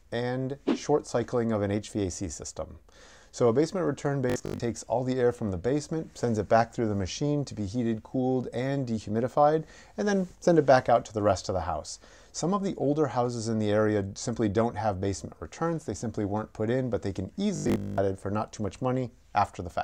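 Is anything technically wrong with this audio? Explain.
Yes. Robotic sound from repeated short buffers at 4.30–4.60 s and 17.56–18.00 s: a rigid 50 Hz buzz, likely from a 20 ms buffer replayed. Unlike a dropout, the sound continues.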